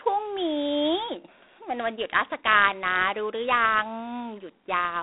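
A harsh, rasping hiss rides on this speech throughout and rises and falls with its level, and the sound is confined to a narrow telephone band of about 250 Hz to 3.7 kHz, with nothing above 3.8 kHz. This is G.726 ADPCM coding damage, which fits the 24 kbit/s rate, where too few bits per predicted difference leave audible quantisation noise.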